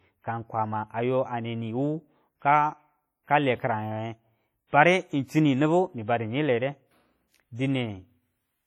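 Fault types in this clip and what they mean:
WMA compression: The whole clip has heavy transform-codec damage, likely from WMA 1 at a low bitrate around 32 kbps. Long blocks smear quantisation noise into a ringing, washy hiss that breathes with the speech, though content still reaches about 20.1 kHz.
Pre-echo: Just after "kale kiranwenge", from 4.68 to 4.73 s, a sharp attack is preceded by a short hiss. Noise sized for the loud onset has spread about 50 ms backward through its block, softening and smearing the attack.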